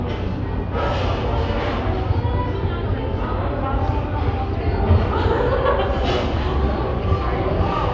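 No technical faults can be heard anywhere in this audio, so there are none to describe in time order.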